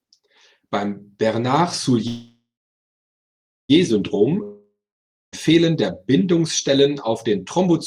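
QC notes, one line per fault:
2.07–3.71 s, call audio freeze: packets were likely held up in transit and the jitter buffer ran dry. The last sound is stretched into a fading buzz that goes silent for about 1.2 s. The speech then resumes where it stopped, 1.62 s late, with nothing lost.
4.43–5.34 s, long network dropout: a stretch of packets likely never arrived. The receiver filled 0.9 s by extending the last sound into a decaying hiss that settles into about 0.56 s of silence. When the speech returns, about 0.9 s of it is simply gone.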